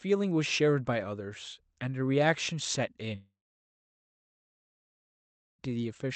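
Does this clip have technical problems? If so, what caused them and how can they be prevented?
Yes. A long network dropout runs from 3.15 to 5.62 s, likely from packets failing to arrive. The last sound smears into a fading buzz or hiss, then about 2.2 s of near silence. Audio resumes with that stretch lost. A more stable network connection would prevent it.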